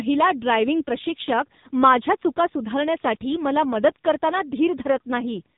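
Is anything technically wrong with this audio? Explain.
Yes. Throughout the speech, an AMR narrowband mobile codec at a low bitrate, consistent with about 6.7 kbps, rebuilds the voice from a vocal-tract model, cutting everything above 3.8 kHz and leaving it buzzy, muffled and synthetic.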